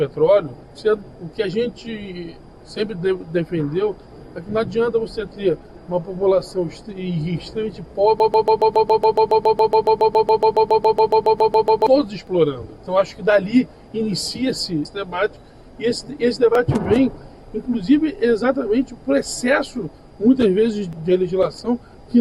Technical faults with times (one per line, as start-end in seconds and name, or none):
8.20-11.87 broken-record loop